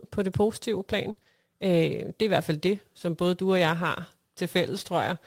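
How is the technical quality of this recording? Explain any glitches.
The recording has one cluster of network damage, about 1.1 to 1.3 s into the speech, right after "på det positive plan". Three kinds of loss follow one another there.

From 1.11 to 1.19 s there is a burst of packet loss. About 60 ms of audio never arrived in time, and the receiver filled the hole by extending the last sound while fading it down. If that sound was voiced, this gives a brief held buzz; if not, a dying hiss. The speech then resumes with that stretch missing.

Two short concealed packet losses follow, from 1.19 to 1.23 s and from 1.23 to 1.27 s, each about 20 ms. Each time the decoder synthesised a continuation of the preceding sound, pitched or noise-shaped, and crossfaded back into the real signal. Back to back, they sound like a quick smear or wobble, and a brief consonant in that span may be swallowed.

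From 1.27 to 1.29 s, one lost packet was rebuilt from error correction. The following packet carried a low-bitrate duplicate of it (Opus in-band FEC), so about 20 ms plays without a gap. That frame is coarser and noisier, and if the call is full-band, its upper frequencies dip because the copy does not hold them and the decoder only estimates them.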